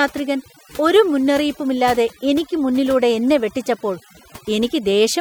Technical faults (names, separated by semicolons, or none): overdone noise removal